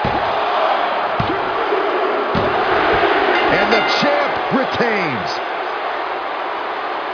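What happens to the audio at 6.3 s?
Nothing goes wrong at 6.3 s; the audio plays through that moment intact, with no dropout, click or other fault.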